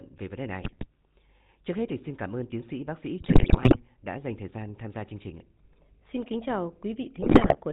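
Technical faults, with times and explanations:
Throughout: GSM full-rate codec. The speech passes through a 13 kbps vocal-tract model driven by regularly spaced pulses, with every third excitation sample kept and nothing above 4 kHz, so the voice has a plainly audible buzzy, gravelly roughness and a dull top end.
0.61 to 0.87 s: GSM bit errors. Just after "về vấn đề", corrupted bits, around 3.4 percent, reach the decoder's filter, pitch and gain values, bending the spectrum and jolting the level frame by frame into squawks and gargling.
3.20 to 3.77 s: GSM bit errors. Between "tiến sĩ bác sĩ" and "đã dành thời gian", the worst burst, around 6.1 percent of bits flipped, sustains over half a second of spectral distortion, pops and level blow-ups.
7.22 to 7.56 s: GSM bit errors. After "kính chào", roughly 5.8 percent bit corruption again scrambles the decoded parameters, producing squawking and gargled bursts as individual frames decode with wrong spectral shape and gain.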